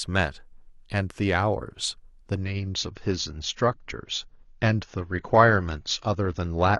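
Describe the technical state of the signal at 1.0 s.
At 1.0 s the speech signal is intact, with no audible fault at that moment.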